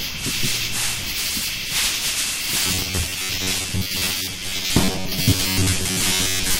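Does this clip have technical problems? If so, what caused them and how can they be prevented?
Yes. From 2.66 s to the end at 6.60 s the sound turns into a rigid, metallic buzz at about 94 Hz: robotic sound from repeated short buffers. The likely cause is audio arriving too seldom, so the software repeats the last segment, roughly 10.7 ms long, for most of that stretch while the real audio is skipped. Unlike dropouts or clicks there are no gaps, only a steady buzz locked to the repeat rate. Keeping the audio path fed, with larger buffers and enough processing headroom, prevents it.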